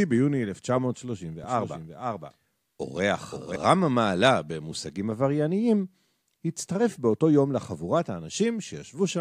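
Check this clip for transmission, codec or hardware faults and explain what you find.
One fault: a doubled audio track from 1.44 to 3.56 s. A second full-band copy of the speech trails about half a second behind, a few decibels quieter, likely from a slower capture path mixing the same signal in again. Unlike an acoustic echo, it has no decay or room colour and starts and stops abruptly.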